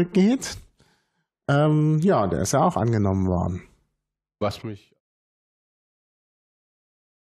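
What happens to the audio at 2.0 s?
Nothing goes wrong at 2.0 s; the speech there is intact, with no dropout, click or level change.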